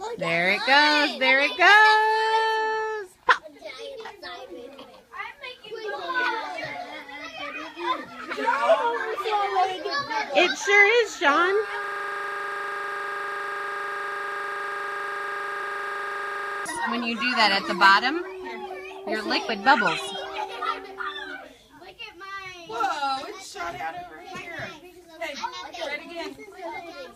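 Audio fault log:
9.62–9.64, 15.61, 19.48–19.50: compressed frames skipped. Roughly 70, 50 and 50 ms of audio vanish as damaged or missing frames drop out. Each join shows as a step discontinuity or short blip in the waveform.
11.84–16.66: system hang loop. A freeze left the hardware replaying one 40 ms buffer 122 times at 25 Hz. The spectrogram shows identical repeating slices with a 25 Hz comb.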